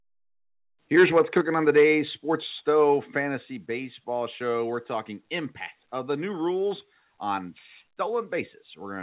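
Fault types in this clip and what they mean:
Microphone overload, 0.96 to 1.38 s and 1.69 to 1.84 s: the loudest syllables gain a harsh, crackling edge because their peak tops are sliced flat, driven about 5 dB and then about 4 dB past the converter's limit. Only a few percent of samples are cut, likely from an input volume set too high.
Microphone volume stepped down, at 1.41, 2.43 and 3.45 s: voice and background fall together in sudden steps, first by about 5 dB right after the initial overload, then by about 3 dB twice. This is likely the call software reducing the device's input gain in single jumps.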